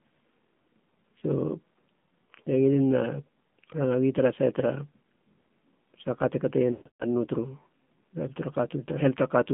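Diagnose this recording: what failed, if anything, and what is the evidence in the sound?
The codec stage is at fault throughout. The audio has been through the AMR narrowband mobile codec at a rate that sounds like 7.4 kbps, leaving plainly audible buzzy, synthetic speech. The line band runs from 150 Hz to 3.5 kHz. On a spectrogram, energy stops at a hard ceiling near 3.5 kHz with nothing above it, and the low end thins out below 150 Hz. The codec models the vocal tract and excites it with a few sparse pulses, so the harmonics look smeared and grainy.

There is also a network or radio fault: lost AMR speech frames between 6.72 and 7.05 s. About 260 ms of speech is missing in all, scattered across roughly 280 ms, and the longest unbroken gap is 140 ms. The decoder filled each gap by repeating the last good pitch and vocal-tract settings at falling gain. The sound drags into a warbling smear and then fades toward silence before speech returns weak and rough. 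A waveform shows the envelope decaying in steps, and a spectrogram shows frozen, repeated harmonic bands dimming through that span.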